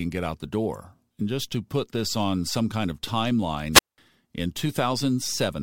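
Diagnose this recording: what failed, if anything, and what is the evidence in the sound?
A wireless microphone squelch dropout occurred in the analogue radio link. Between 3.72 and 3.98 s, the radio signal fades and the receiver's squelch mutes the output for about 0.19 s before the voice returns. On the spectrogram, this appears as a near-empty vertical band, and on the waveform as a flat gap.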